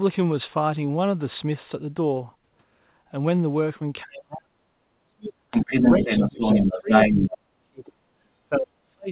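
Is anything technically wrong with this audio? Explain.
Yes, there are two kinds of fault, and they overlap in the second half of this speech clip.

Speech suppressed in double talk occurs at 4.03–4.61 s, 4.92–5.38 s, 5.91–8.01 s and 8.46–9.10 s. The talker's level sinks by around 35 to 40 dB in pieces, likely because an echo canceller facing simultaneous talk ducked everything. Unlike packet-loss dropouts, the gaps follow the other side's activity rather than falling at random.

The other side's voice leaking through runs from 5.51 to 7.31 s. A second voice comes in at roughly 5 dB louder than the talker, likely loudspeaker echo the canceller failed to remove. Unlike studio crosstalk, it comes from far-end playback, with the whole band stopping near 4 kHz as a G.711 telephone path would.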